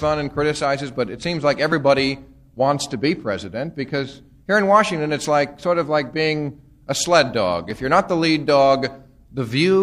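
At 1.72 s and again at 7.71 s there is overlap between stream segments. Two-second segments had overlapping time stamps. The player trimmed about 40 ms of real sound each time. The waveform jumps, giving a short skip.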